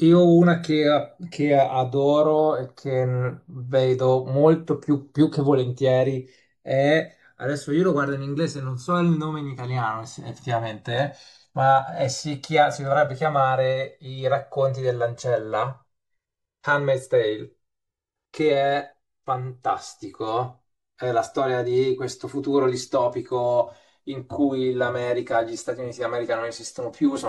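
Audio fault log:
Throughout, channels drifting apart: the channels run on separate clocks that disagree by around 150 parts per million, so the delay between them creeps to roughly 4 ms by the end. Summed to mono, comb notches sweep slowly through the speech as a slow flanging.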